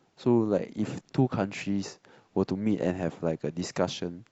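Nothing in the speech recording points to a technical fault anywhere in the signal.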